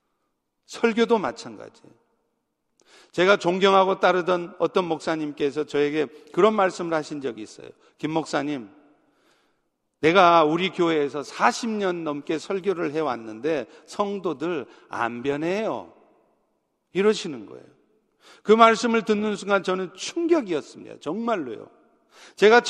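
Nothing here calls for comment: the speech runs along with no technical faults turning up anywhere in the recording.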